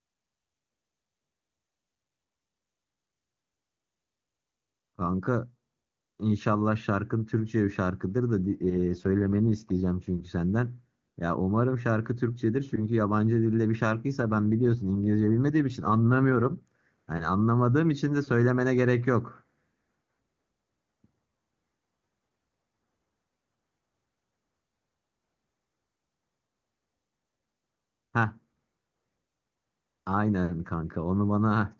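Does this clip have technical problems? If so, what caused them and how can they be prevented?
Yes. AMR rate drop, from 8.51 to 9.87 s and again from 14.20 to 16.68 s: the speech turns rougher and more synthetic while the bandwidth stays the same and nothing cuts out. This fits the link forcing the AMR-WB codec down from about 23.85 to 8.85 kbit/s so that more of its bits go to error protection, and the clear quality returns each time the rate recovers. Stronger radio coverage or a more stable network connection would keep the codec at its full rate.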